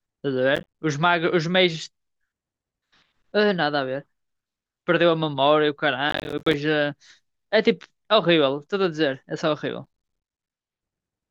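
Three bursts of processor overload crackle hit this speech, at 0.56 to 0.79 s, 6.10 to 6.54 s and 9.84 to 10.50 s, each longer than the last. The processor keeps missing its deadlines, and every late buffer drops out as a short hole of silence with hard edges. Stacked up, those holes give a gritty, tearing crackle over the voice. The spacing fits buffers of roughly 10 ms, with a dozen or more lost in each burst.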